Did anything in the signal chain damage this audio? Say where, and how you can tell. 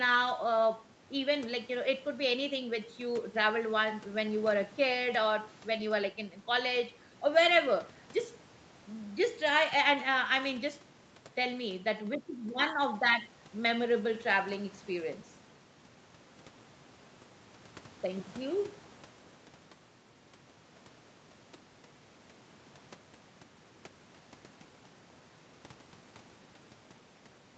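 No, nothing in the signal chain has damaged this speech. It carries the expected marks of a normal call path, with the content stopping at 8 kHz from the codec's bandwidth and the lowest bass trimmed by the microphone processing, and neither is a fault.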